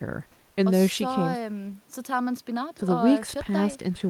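No technical faults can be heard anywhere in this recording, and the signal stays intact and continuous throughout.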